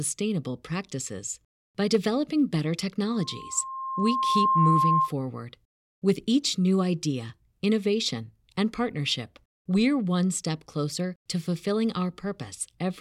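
From 3.12 s to 5.13 s a loudspeaker feedback squeal rises under the speech: a single tone near 1.1 kHz swells over roughly a second and a half until it sits a few decibels above the voice. A microphone was picking up the loudspeaker it fed, and at that frequency the loop gain passed one, so the tone fed itself. Its gradual build from nothing is what separates it from a steady interfering tone or hum, which would arrive at full level.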